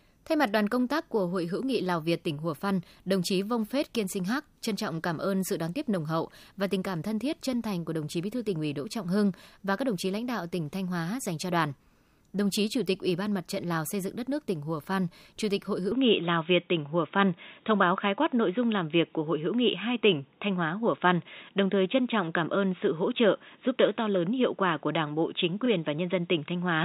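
From 15.92 s to the end, the speech suddenly turns dull and boxy with no gap, losing everything above 3.8 kHz. The level shifts by about 5 dB and a faint new noise floor appears. The input likely switched to a poorer device with a narrower band.

At 25.65–25.67 s a tiny stutter is heard as a 24 ms slice plays twice. These are repeated frames: one compressed block, which fits a 24 ms frame, was written again, adding 24 ms to the audio.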